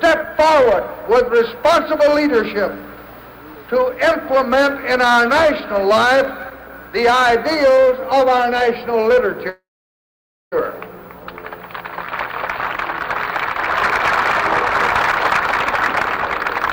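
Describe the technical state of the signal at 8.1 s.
At 8.1 s the signal is intact, with no dropout, distortion, glitch or other fault to be heard.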